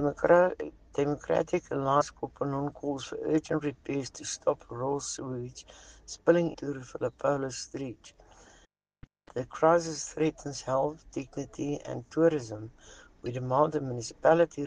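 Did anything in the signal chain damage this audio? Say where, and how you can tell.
Yes. Damaged data in a compressed stream, at the codec or storage stage, causes brief glitches at 2.00–2.02 s, 6.53–6.55 s and 13.26 s. Corrupted frames make the decoder lose sync. A spectrogram shows short broadband smears, and the waveform shows abrupt discontinuities.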